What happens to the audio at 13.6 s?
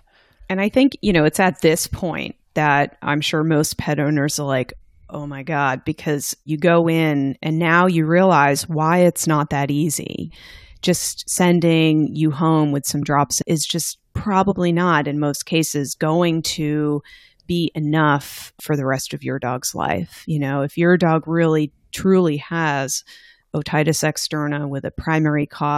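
At 13.6 s the speech carries on intact, with no dropout, click, distortion or other fault at that point.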